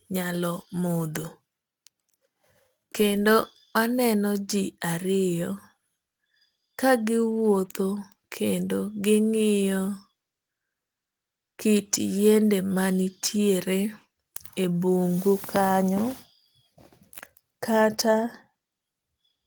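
Sample clock jitter is present throughout. The converter's timing wanders by a few microseconds, so samples land slightly early or late. The error follows the waveform's slope, so a grainy hiss about 25 dB below the speech rises on loud, bright sounds and vanishes in pauses.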